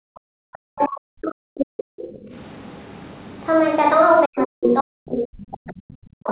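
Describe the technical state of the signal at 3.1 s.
At 3.1 s the speech is intact, with no dropout, glitch or distortion, only the narrow telephone-band sound of the call path, which carries nothing above about 4 kHz.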